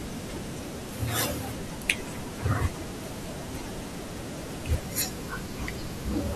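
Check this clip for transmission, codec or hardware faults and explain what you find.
One fault stands out, a section at the wrong speed, running from 0.00 to 4.81 s. Over that stretch the speech plays back about 1.29 times faster than it was recorded, most likely because the section was clocked or resampled against the wrong rate somewhere in the chain. Because speed and pitch move together, the voice sounds rushed and raised by roughly four semitones, then drops back to its natural pace and pitch right after 4.81 s.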